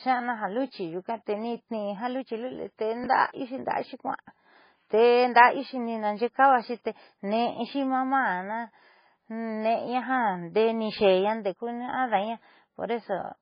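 Speech, with heavy codec damage throughout: the sound is watery and swirly, with weak detail flickering in and out between frames and nothing above 5 kHz. This is likely MP3 compression at a very low bitrate, around 16 kbps. Unlike simple low-pass filtering, the damage shifts from moment to moment rather than just dulling the top. Chunks out of order occur at 3.04–3.06 s and 10.99–11.01 s: a 10 ms piece plays one chunk late, giving a brief jumbled moment with three hard joins. Unlike a dropout, no audio is missing, only reordered.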